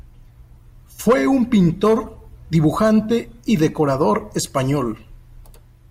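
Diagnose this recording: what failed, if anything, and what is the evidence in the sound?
Nothing failed here: listening closely, there's no point in the recording where any stage of the chain gives itself away, so there's simply nothing to diagnose.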